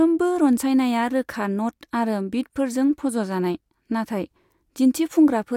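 Speech, with nothing technically wrong in it.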